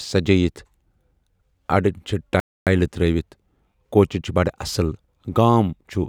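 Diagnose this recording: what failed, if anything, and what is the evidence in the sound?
The speech cuts out abruptly at 2.4 s and the output stays silent until 2.67 s, a gap of about 270 ms in mid-flow before the sound returns. This is a playback stall, and the fault most likely sits at the playback stage: the player either ran short of buffered data or had its output thread held up, so nothing reached the output for that quarter-second until it recovered and resumed feeding audio.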